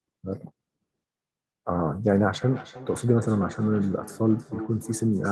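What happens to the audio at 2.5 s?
From 2.42 s to the end, there is feedback echo between two devices. A second device replays the speech into a nearby microphone whose echo canceller can't remove it, so words return about every 0.3 s, thin and ringing, peaking about 16 dB below the speech. A spectrogram shows faint, evenly spaced copies trailing each syllable.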